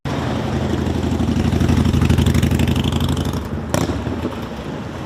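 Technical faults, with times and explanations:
1.16–4.55 s, call bitrate drop: the encoder was starved of bits, which fits a fall from 96 to 19 kbps, so the sound turns rough and muffled, bottoming out for 1.07 s.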